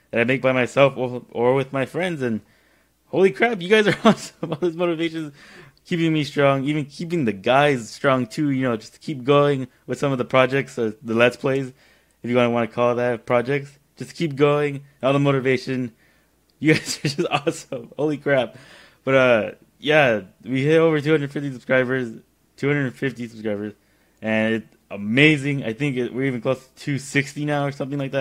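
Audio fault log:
No faults can be heard anywhere in this recording.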